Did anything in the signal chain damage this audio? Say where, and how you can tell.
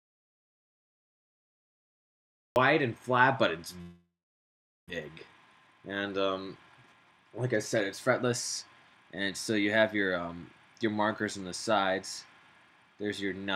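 Yes. From the start to 2.56 s the input is already lost: the signal is silence with no room tone, most likely a dropped input writing silence at the driver stage.

At 3.81 to 4.92 s there is a long network dropout: the last sound is stretched into a fading buzz, then about 0.8 s of silence. Roughly 0.6 s of audio never returns.

Two jitter buffer speed-ups follow, at 5.09 to 5.75 s (111% speed) and 6.56 to 10.43 s (110%). The pitch stays put while the pace hurries, as the network receiver trims pitch periods to drain the backlog.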